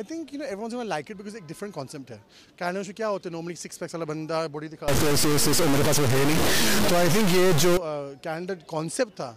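From 4.88 s to 7.77 s the audio turns harsh and buzzy, and the quiet stretches fill with a loud hiss. This fits a stuck bit, likely a converter or data line holding one fairly high bit fixed, so samples jump by a step of around -15 dBFS. On a waveform the trace shows hard offset steps and a raised floor; a spectrogram shows broadband energy smeared across all frequencies for that span.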